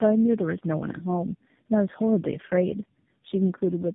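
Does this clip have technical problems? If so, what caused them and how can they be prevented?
Yes. Tandem speech coding runs throughout the clip. The speech sounds rough, muffled and warbly, which points to roughly three low-rate speech codecs in a row, plausibly GSM full rate, G.729A and finally AMR-NB. Each one re-encodes the last one's errors, so the damage compounds. On a spectrogram, energy stops at a hard ceiling near 3.8 kHz, and harmonics and formants look smeared and unsteady instead of forming clean striations. Preventing it means keeping the call in one codec end to end, using transcoder-free operation or passing the coded frames through unchanged at each link border.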